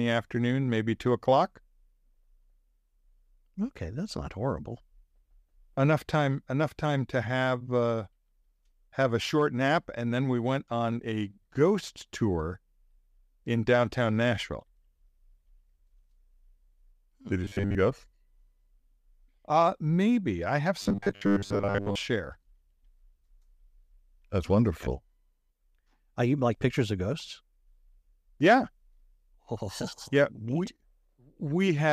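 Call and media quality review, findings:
Robotic sound from repeated short buffers, 17.45–17.75 s and 20.82–21.95 s. Speech collapses into a rigid metallic buzz at 100 Hz, roughly tracking the syllables. Likely a starved playout/jitter buffer looping the last 10 ms of audio while most real input is skipped. Spectrogram: flat, evenly spaced harmonic lines at multiples of 100 Hz replacing moving formants. Waveform: identical 10 ms cycles repeating.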